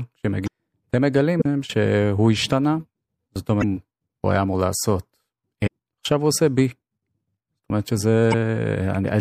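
Throughout, the speech sounds watery and swirly, with dulled treble and smeared consonants, likely from MP3 compression at a bitrate around 64 kbps. At 0.43–0.48, 1.37–1.42, 3.59–3.64, 5.66–5.68 and 8.30–8.34 s, brief squawks and blips come from damaged data in a compressed stream that briefly throws the decoder out of sync.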